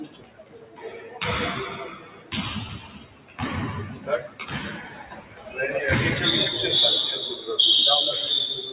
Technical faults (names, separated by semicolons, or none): noise suppressor applied to music or sounds; sound cut by the noise suppressor